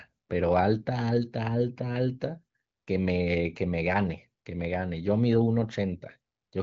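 No technical fault can be heard in this speech recording, which comes through the AMR wideband (HD Voice) codec with nothing above about 7.5 kHz and a clarity that fits its 18.25 kbit/s mode.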